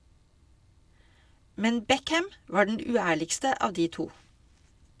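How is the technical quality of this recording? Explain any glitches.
No glitches or faults are audible.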